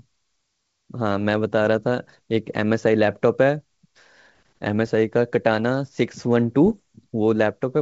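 Bit errors on an ADPCM link strike at 4.87 to 4.91 s and 6.66 to 6.77 s, over the G.722 wideband coding. Each flipped bit throws off the decoder's step size and predictor, so the speech breaks into pops and rough bursts with brief level jumps, heavier at the second, longer hit.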